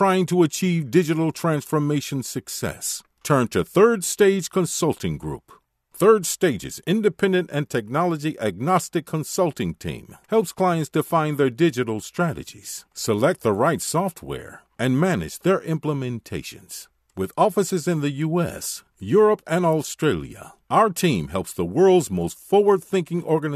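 Nothing in the recording stood out on listening.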